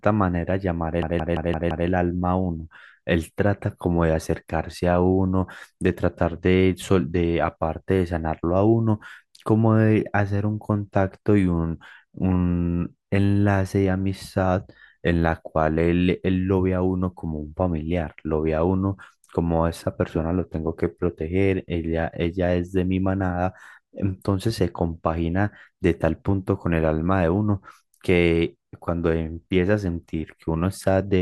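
It's a speech clip with a system hang loop from 1.02 to 1.88 s. The same 171 ms slice repeats five times at about 5.9 Hz, giving a machine-gun stutter, which fits the driver freezing while the hardware cycled an 8192-sample ring buffer. Essentially nothing seems lost afterward.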